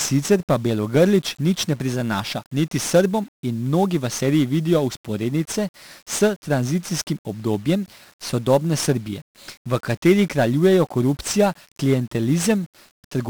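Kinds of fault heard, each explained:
1-bit DFPWM compression: The encoder keeps only one bit per sample, each bit merely nudging an adaptive level up or down, so the speech waveform is rebuilt as a crude running approximation. The heaviness of the damage fits a stream of about 48 kbps. The resulting quantisation error is loud and spread across the whole band, so the speech comes out fuzzy and crackly throughout, with its upper frequencies sunk beneath a constant bed of hiss.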